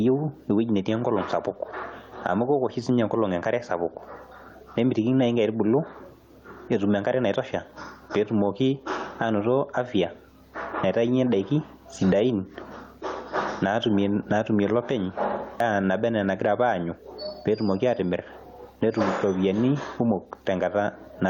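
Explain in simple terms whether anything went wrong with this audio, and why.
Something did go wrong here. The whole recording has gain pumping. The level swings a lot, so loud and soft moments end up squashed close together. The likely cause is the input gain cranked far too high, with a fast limiter constantly yanking it back down.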